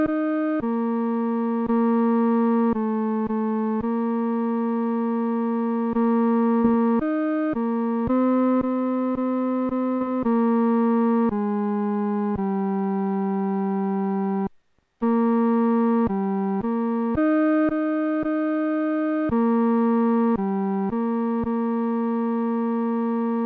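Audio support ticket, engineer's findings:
Short concealed packet loss at 6.60 to 6.66 s. Brief smear, a little wobble where the sound just carries on. About 40 ms never reached the decoder in time, so the receiver's concealment extended the last bit of audio and crossfaded back. Jitter buffer and decoder side. Sits in a band-limited path with nothing above 8 kHz, which fits G.722 at 64 kbps.

Burst of packet loss at 9.94 to 10.05 s. Held, fading tail, then a jump. Roughly 60 ms went missing in a run, and concealment stretched the last sound for about 68 ms while turning it down. The receiver then dropped about 12 ms to catch back up, so a sliver is gone for good. Worth checking network jitter around there.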